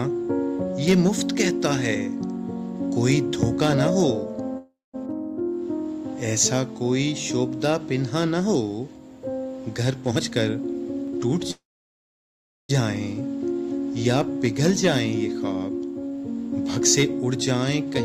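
Twice the audio trails off in a short fading tail and goes silent, at 4.57 to 4.96 s (about 0.2 s of silence) and 11.51 to 12.71 s (about 1.09 s of silence). Each time it resumes exactly where it stopped, so this is a call audio freeze rather than a dropout, likely from delayed packets emptying the jitter buffer. Jitter buffer speed-up appears at 10.11 to 11.42 s (114% speed, roughly a fifth of a second trimmed) and 15.79 to 17.87 s (108%). It hurries the audio while keeping its pitch, which sets it apart from a pitch shift.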